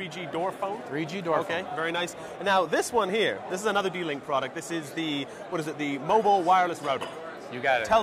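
No technical faults can be heard in this audio, so there are none to describe in time order.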